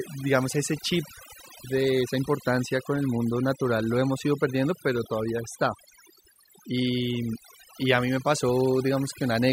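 Overdone noise removal runs throughout. Aggressive noise reduction pulled bands near the noise level down hard. The background drops and breaks into twinkling specks.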